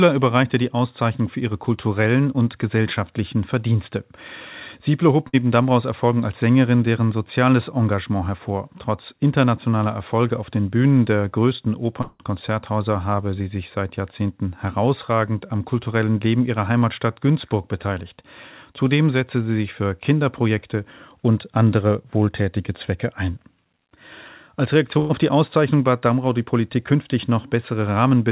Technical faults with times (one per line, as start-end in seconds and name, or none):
5.28-5.35 burst of packet loss
12.01-12.21 long network dropout
24.99-25.11 burst of packet loss